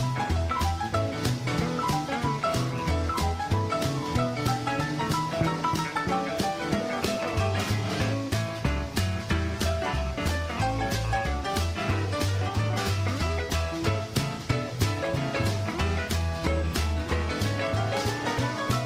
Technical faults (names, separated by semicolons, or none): none